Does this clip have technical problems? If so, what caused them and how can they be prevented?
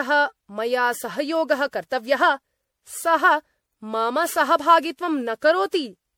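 Yes. Throughout the speech there is generation loss: a swirly, hollow, smeared quality with blurred consonant attacks. It is likely caused by repeated lossy re-encoding, about ten MP3 passes at what sounds like 96 kbit/s, each requantising on a shifted frame grid so the noise and spectral holes build up. A single 96 kbit/s encode would not sound this degraded, and the band reaching 20.7 kHz rules out plain low-pass dulling. To prevent it, keep a lossless master and encode to MP3 only once, from that master.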